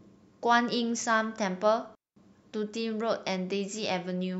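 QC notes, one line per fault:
1.95 to 2.16 s, digital wireless dropout: the speech cuts to near silence for about 214 ms, then returns. The edges are very short fades, not hard clicks. No hiss, crackle or noise burst comes before or after the gap. The receiver lost too much of the digital stream to rebuild the audio. It muted its output until the link recovered. That is why this sounds like a clean hole rather than static.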